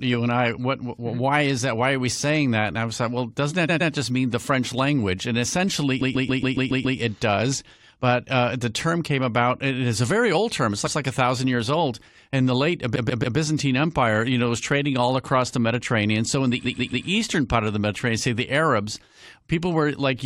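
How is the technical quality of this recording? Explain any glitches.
The speech is marred by repeated frames, heard as stutters. At 3.68 to 3.91 s, after "like well doesn't that", a 116 ms block plays twice more. At 6.00 to 6.98 s a 139 ms block loops seven extra times. At 10.86 to 10.97 s, before "like a thousand years", a 116 ms block repeats once. At 12.95 to 13.36 s and 16.64 to 17.06 s, after "in the", 139 ms blocks play three extra times. A short run of compressed frames was sent again, so the decoder replays it. Each repeat adds time.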